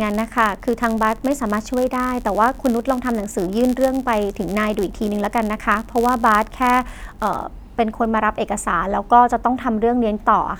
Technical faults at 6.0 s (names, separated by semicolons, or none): block size mismatch (padded)